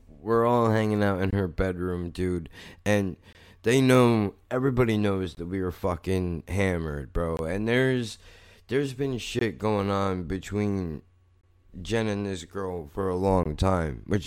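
The speech was delivered in 2-second chunks with a gap between chunks: silence of about 21 ms sits at each join. The holes fall at 1.31–1.33, 3.33–3.35 (after "her bedroom dude and"), 5.35–5.37 (before "that we were fucking"), 7.37–7.39, 9.39–9.41, 11.41–11.43 and 13.43–13.46 s (after "this girl for a"). Each one is a short hole in the sound, repeating at a steady two-second rhythm.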